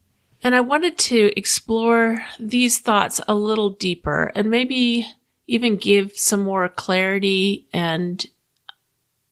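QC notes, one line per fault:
No faults are audible in this speech, and the Opus voice compression, running at 20 kbps in hybrid mode, keeps the full audio band with only light coding traces.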